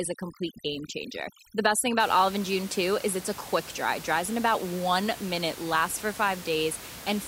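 Right from 0.0 to 2.0 s there's overdone noise removal: the reduction is set too hard, so bands sitting near its noise estimate get pulled to nothing, taking quiet bits of speech along. You hear near-silence with twinkly specks, before the room noise returns about 15 dB under the speech.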